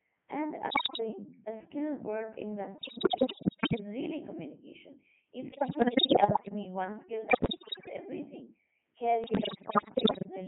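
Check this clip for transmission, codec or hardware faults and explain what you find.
Two faults are audible in this speech: a very low-rate vocoder throughout, and repeated bursts of radio bit errors.

Throughout, the speech sounds robotic and buzzy, confined to roughly 150 Hz to 3.4 kHz, with heavy damage. That is the Codec 2 vocoder, which fits its 3.2 kbit/s mode. It transmits only pitch, voicing, energy and a spectral envelope, then rebuilds the voice from sine waves.

At 0.70–1.00 s, 2.78–3.80 s, 5.52–6.53 s, 7.30–7.93 s and 9.24–10.26 s, the voice lurches in pitch, loudness and tone, breaking into bleeps, warbles and gibberish. These are bit errors on digital voice radio: flipped bits corrupt whole frames' parameters, worst in the first burst.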